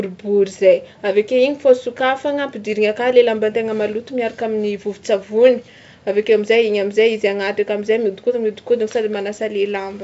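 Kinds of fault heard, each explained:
No faults found; the speech is carried by G.722 wideband telephone coding at 64 kbit/s, with at most faint traces of the coding.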